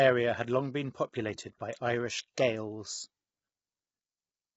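Low-delay AAC compression runs throughout this speech clip: the voice sounds rough and grainy, with noise filling the gaps between harmonics and nothing above 7.8 kHz. The likely cause is AAC-ELD, whose short frames resolve pitch poorly, and heavy damage at a rate that fits about 16 kbps.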